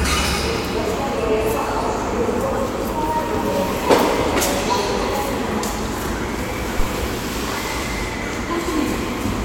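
A phantom power thump lands in this everyday-sound recording at 6.80 to 6.87 s. A supply switched on or off on the live input pushed a voltage step through the coupling capacitors. It's a deep thud peaking near -8 dBFS and decaying over about 17 ms. The waveform shows one offset swing, and the spectrogram a brief low-frequency smear.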